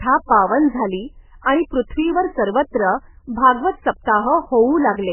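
Throughout the speech, nothing reaches above 3 kHz, and weak frequency components flicker on and off between frames, giving a watery, swirling texture with smeared consonant onsets. This is likely heavy MP3 compression at a very low bitrate, near 8 kbps; a plain low-pass filter would dull the sound without that swirl.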